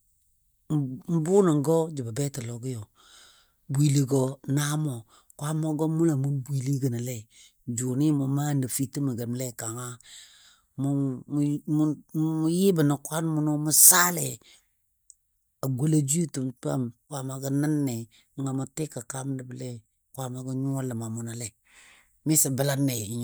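Nothing stood out as a technical problem on listening to this speech recording.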